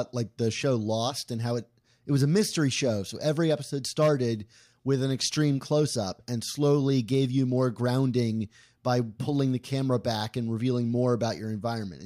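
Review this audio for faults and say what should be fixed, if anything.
Nothing in this audio needs to be fixed, as no faults are present.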